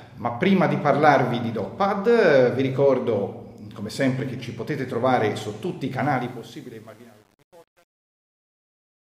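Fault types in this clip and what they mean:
Truncation distortion on a fade: the fade-out that begins around 6 s is processed without dither and with too few bits, so as the level drops the waveform collapses into coarse steps, consistent with a path around 9 bits deep. From 6.03 s the tail turns grainy, and from 6.39 s to the end at 9.15 s it is at its worst, with the decaying sound at its most gritty.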